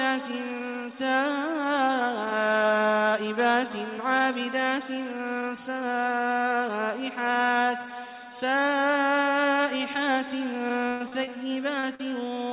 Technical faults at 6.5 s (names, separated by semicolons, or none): none